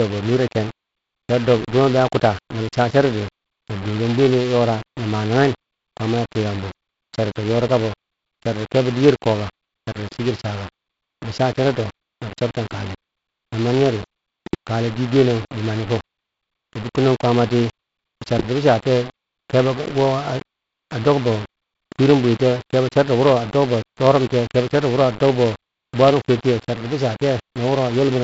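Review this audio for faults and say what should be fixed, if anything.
Grainy distortion follows the speech throughout, turning quiet passages gritty. Likely cause: low bit depth without dither, rounding that fits 5 bits, leaving error around 20 dB below the signal. On a waveform it looks like coarse stair-steps, and on a spectrogram like noise that tracks the speech. Keep more bits, or add dither before reducing word length.

A steady 375 Hz buzz runs throughout and swells with the speech level: a filter restarted on every block, which fits 128-sample blocks. The waveform shows a small transient at each block start, and the spectrogram shows a line at 375 Hz with harmonics. Carry the filter state over between blocks instead of resetting it.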